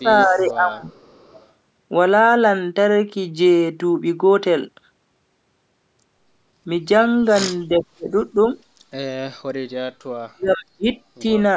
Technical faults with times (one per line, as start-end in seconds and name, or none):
0.00-0.88 speech suppressed in double talk
0.17-0.45 echo leak
0.90-1.48 echo leak
7.68-8.13 speech suppressed in double talk
10.28-10.88 speech suppressed in double talk
11.19-11.25 speech suppressed in double talk